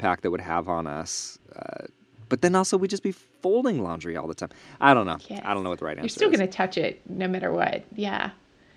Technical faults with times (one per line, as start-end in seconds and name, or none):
none